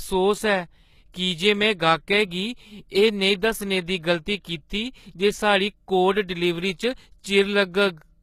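HE-AAC compression runs throughout the speech, with nothing above 14.9 kHz. The top band is likely rebuilt by spectral band replication, copying lower bands upward, so s sounds turn gritty and lispy, plainly audible damage that fits a very low bitrate around 20 kbps.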